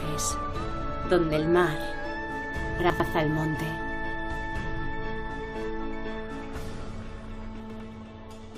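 Chunks out of order at 2.8 to 3.0 s and again at 7.6 to 7.8 s: a 100 ms chunk plays one chunk late, swapping places with its neighbour. The sound jumbles briefly at the three hard joins.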